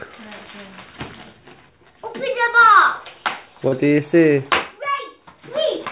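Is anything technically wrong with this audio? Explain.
Yes. At 3.68 to 3.74 s there is a short concealed packet loss: about 40 ms of the call arrived too late to decode, and the receiver extrapolated from the preceding sound before crossfading back. It is heard as a brief smear rather than silence, which distinguishes it from a true dropout. The band limit near 4 kHz, consistent with a narrowband call codec such as G.711, comes from the call path and is not a fault.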